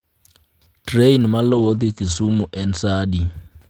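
From 1.5 s to 3.39 s, a call bitrate drop cuts the speech from 32 to 11 kbps. Bandwidth shrinks from 20 kHz to 8 kHz. The sound turns coarse and muffled.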